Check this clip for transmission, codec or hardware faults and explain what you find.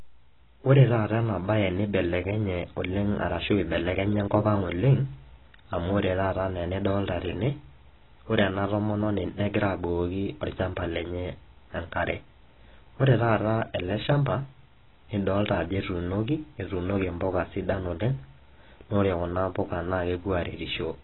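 The speech carries AAC compression damage from start to finish, heavy throughout. The top end is cut off, and the sound is dull and smeared with a warbling, fizzy texture on sibilants. The likely cause is AAC-LC coarsely quantising its frequency lines and dropping the upper band, which fits a bitrate near 16 kbps.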